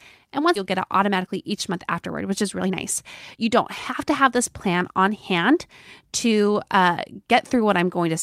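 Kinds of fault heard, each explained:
Skip ahead: at 0.55 s the speech jumps forward with no gap, losing roughly a second, because audio was dropped and the two sides joined.
Jitter buffer speed-up: speech runs hurried at unchanged pitch, 11% fast early on and 6% fast after "don't have", as repeated pitch-period trimming shed excess buffered delay.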